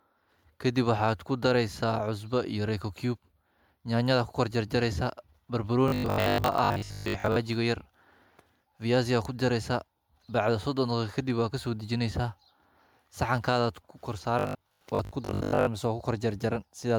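Throughout, the speech sounds swirly, smeared and hollow, with blurred attacks. This is likely generation loss: the audio appears to have been re-encoded as MP3 at 128 kbit/s around ten times, each pass quantising on a shifted frame grid so noise and spectral holes accumulate.

From 5.88 to 7.36 s, and again from 14.39 to 15.69 s, the speech turns into a rigid, metallic 50 Hz buzz that only loosely follows it. This is likely robotic sound from repeated short buffers. The pitch fits 20 ms of audio being replayed while real audio is skipped, for most of the first stretch and about half of the second.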